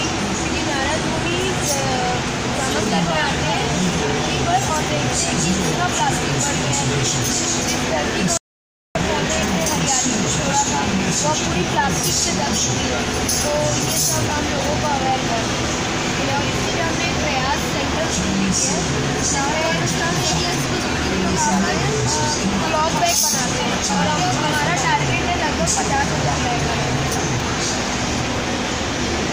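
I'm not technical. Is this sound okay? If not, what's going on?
No. An audio dropout to silence hits at 8.37 seconds and lasts about 0.58 seconds, until 8.95. The sound stops dead and the gap is total silence, not even background hiss. The likely cause is the input briefly cutting out, so whatever happened then is lost.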